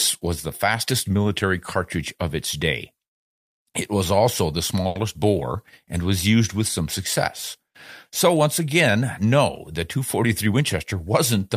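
A speech recording with two timing faults. From 4.87 to 4.97 s, just after "was also the" and before "bore and was used", the sound freezes on one held tone for about 80 ms with a slight buzz or dip, then carries on without losing anything. This is a short stall from a late packet: the jitter buffer ran dry, so the receiver stretched the last sound to fill 80 ms and resumed at the same point, leaving playback 80 ms later than before. From 10.23 to 11.07 s, after "once again no the", the speech sounds rushed, running at about 108% speed with unchanged pitch. This is a jitter buffer speed-up. With too much audio queued, the receiver repeatedly cut out short pitch-period-sized slices, around 70 ms in total, to bring the delay back down.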